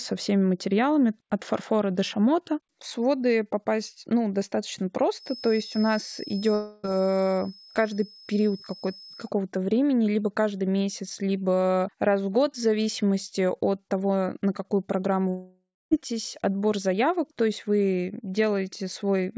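From 5.13 s, after "своды попасть ну достаточно", a thin steady tone near 5.2 kHz sits well below the speech until 9.33 s, ending before "времени либо каждый месяц". This is a feedback whistle, likely from a loudspeaker-to-microphone loop held just short of runaway. Unlike howling feedback it never builds into a howl, only swelling and fading slowly.

At 6.54 s, beneath that whistle, a long network dropout removes about 0.3 s of audio. The gap is filled with a fading buzz rather than clean silence, which is likely the receiver stretching the last sound it had. A second dropout runs from 15.29 to 15.93 s, between "того на какую программу" and "отбор заявок то есть". About 0.62 s is lost there, with a decaying fill ending in roughly 0.27 s of silence. Speech resumes further on rather than picking up where it stopped, which separates this from a brief glitch. The G.722 call path passes nothing above 8 kHz, and the whistle sits inside that band.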